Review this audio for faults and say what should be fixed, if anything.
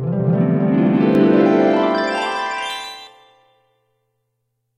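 Doubled audio track, from 1.15 to 3.07 s: a second full-band copy of the sound trails the original by roughly 150 ms at about 5 dB lower, with no decay or room colour, and switches on and off abruptly. It likely comes from a second, slower capture path being mixed in. To prevent it, route each source through a single capture path and mute any duplicate monitoring or loopback feed before mixing.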